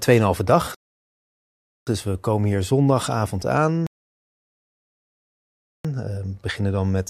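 At 0.75 s and again at 3.87 s, after "we komen hier zondagavond", the speech halts in rebuffering stalls of 1.1 s and 2.0 s. Playback starved for data, went silent, then resumed exactly where it stopped.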